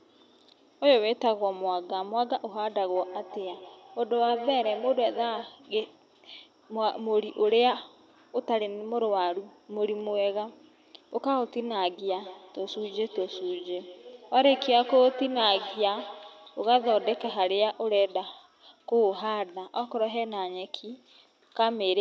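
Feedback echo between two devices affects this speech clip from 2.95 to 5.61 s and again from 12.05 to 17.51 s. The sound returns roughly every 150 ms at up to about 13 dB below the speech, as a second device in the room replays it into a microphone whose echo canceller cannot remove it.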